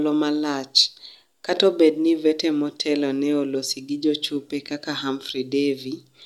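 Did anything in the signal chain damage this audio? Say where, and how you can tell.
No, nothing at any stage of the chain has audibly damaged this speech.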